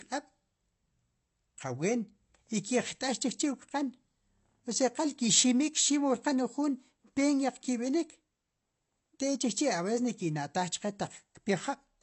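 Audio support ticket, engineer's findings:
Low-bitrate audio saved at a high bitrate, likely: an earlier low-rate encode, consistent with AAC around 32 kbit/s, re-saved as high-rate MP3. Throughout. Nothing above 8 kHz, so speech sounds dull and band-limited. First-pass coding artefacts remain; the larger file restores nothing.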